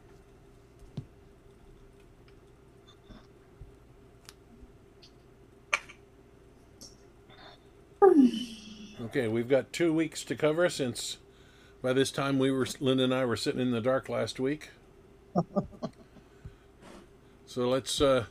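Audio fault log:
No technical faults can be heard in this audio.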